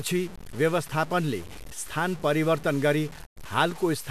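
Throughout the speech there is a coarse, grainy distortion that rises and falls with the sound. The likely cause is low bit depth without dither, from truncation to around 6 bits, leaving error only about 20 dB down. On a waveform the quiet stretches show visible steps, and a spectrogram shows a broadband haze that tracks the voice.

From 3.25 to 3.38 s a digital broadcast dropout occurs. The sound fades out over about 20 ms and stays silent before returning, which fits roughly 96 ms of programme lost when the receiver muted bad frames. A waveform shows a flat gap, and a spectrogram shows a blank vertical band.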